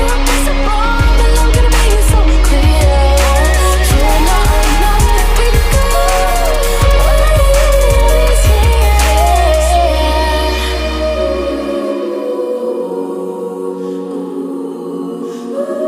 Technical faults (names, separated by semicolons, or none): none